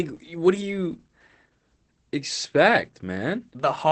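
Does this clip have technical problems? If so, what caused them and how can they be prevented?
Yes. Throughout, Opus voice compression in its linear-prediction mode coarsely codes the speech, which sounds muffled, hoarse and slightly robotic, consistent with roughly 12 kbps. Prevent it by encoding at a higher bitrate.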